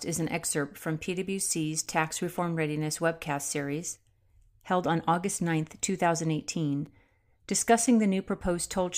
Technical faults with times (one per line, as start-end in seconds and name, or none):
1.86 gap between stream segments
6.86 gap between stream segments
7.86 gap between stream segments